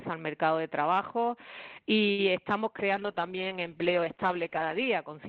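At 2.11 s a short stall from a late packet holds the sound for about 70 ms, until 2.20 s. The jitter buffer ran dry, so the receiver stretched the last sound, then resumed where it stopped. Nothing is skipped, which sets it apart from packet loss: the sound smears briefly with a faint buzz or dip, and everything after runs 70 ms later.

From 2.96 s to 5.10 s a call bitrate drop takes the Opus stream from 40 kbps down to 9 kbps, staying at the lowest rate for about 1.9 s. Coarser coding makes the sound rough and watery, and the audio band shrinks from 12 kHz to 8 kHz, dulling the top. Unlike a simple low-pass filter, the coding noise rises along with the loss of treble.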